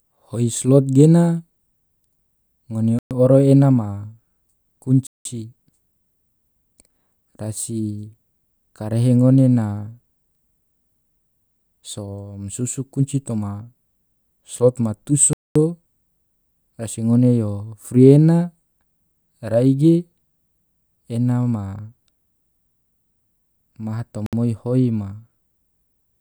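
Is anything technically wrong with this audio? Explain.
Yes. The speech drops to dead silence four times, at 2.99–3.11 s (120 ms), 5.07–5.25 s (184 ms), 15.33–15.56 s (223 ms) and 24.26–24.33 s (65 ms), then resumes abruptly. The likely cause is a Bluetooth stall: radio interference delays packets, the receiver's playout buffer empties, and output halts until retransmitted data arrives. The result is clean gaps of varying length rather than crackle or distortion.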